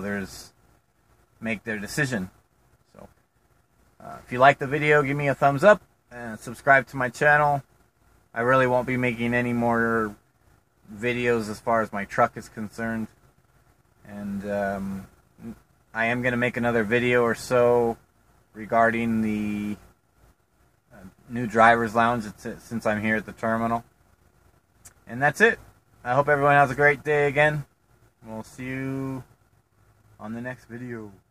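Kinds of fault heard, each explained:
No technical faults can be heard anywhere in the audio, which keeps a steady, intact signal throughout.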